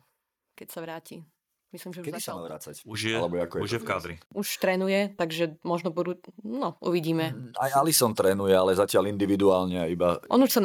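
The call software judged the microphone too quiet and raised the device's input volume in a single step, a microphone volume stepped up fault at 2.94 s in this speech clip. Because the change is applied at the input, voice and background noise jump up together by about 8 dB at that instant rather than easing in, so the level before and after sits on two distinct plateaus with an audible seam between them.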